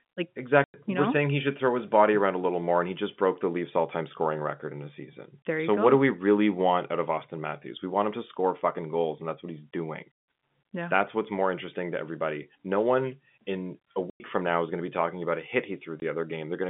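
Speech over a telephone-band line has hard-edged dropouts at 0.64–0.74 s before "you know we're saying", 14.1–14.2 s between "one in a" and "from now is going", and 16.0–16.02 s after "talking about a hit". This is packet loss filled with silence, with gap lengths that fit five 20 ms packets, five packets, then one.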